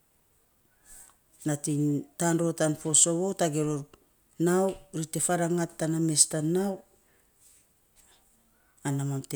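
No technical faults can be heard anywhere in this speech recording. Nothing in the sound points to a breakdown in capture, transmission or playback.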